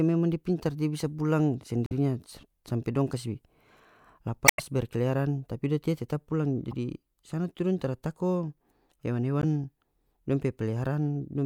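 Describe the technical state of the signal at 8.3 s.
At 8.3 s the speech signal is intact, with no audible fault at that moment.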